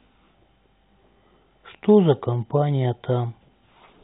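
No faults found in this speech; the call path leaves nothing above 4 kHz, consistent with narrowband G.711 mu-law coding, and that band limit is normal for such a link.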